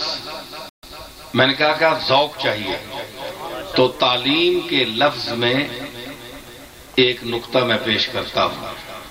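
From start to finish there's a gritty, grainy distortion that tracks the sound, with the error sitting around 25 dB below the signal. That's likely low bit depth without dither, rounded to roughly 7 bits, so the error follows the signal instead of forming a smooth noise floor.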